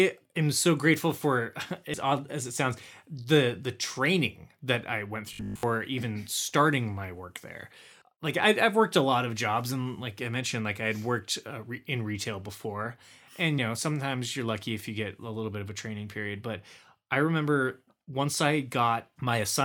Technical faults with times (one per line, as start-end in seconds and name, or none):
1.93 compressed frames skipped
5.33-5.63 robotic sound from repeated short buffers
8.01 compressed frames skipped
13.58 compressed frames skipped